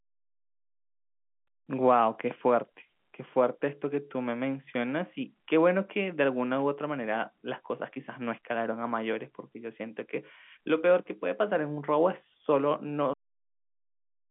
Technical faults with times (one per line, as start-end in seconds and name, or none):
13.13-14.30 cut-off end